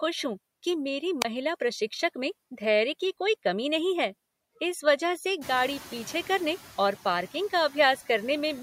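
Speech recorded through a noise suppressor shows noise suppressor artifacts across the whole clip. The processor pulls down whichever frequency bands it judges to be steady noise, cutting the background by about 16 dB, frame by frame. The residual noise therefore dips in the gaps and swells back up beneath the talking. At 1.20 to 1.25 s, between "हूँ कि मेरी" and "प्रशिक्षक में धैर्य की", there is a wireless microphone squelch dropout. The analogue FM link fades, a short burst of hiss rises, and the receiver's squelch mutes the output for about 26 ms, leaving a brief hole of near silence before the signal comes back. Around 5.5 s the room noise jumps by about 18 dB, settling about 19 dB below the speech. That sets off the noise suppressor catching up from 5.41 to 6.58 s, between "है इस वजह से" and "और पार्किंग का". The suppressor's noise estimate trails the sudden rise, so the louder background initially comes through with only about 5 dB of reduction. 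Over roughly 1.17 s the estimate adapts and the noise sinks back under the processing.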